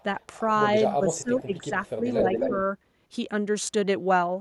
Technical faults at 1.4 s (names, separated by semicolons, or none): speech suppressed in double talk